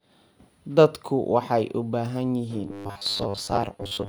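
Speech clip that turns into a robotic sound from about 2.68 s to the end at 4.09 s. It's a rigid 100 Hz metallic buzz over most of the stretch, likely from repeated short buffers of about 10 ms looping while real audio gets skipped.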